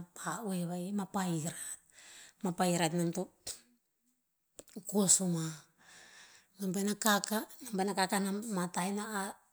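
No technical faults can be heard anywhere in the speech. Nothing breaks into or alters the audio at any point.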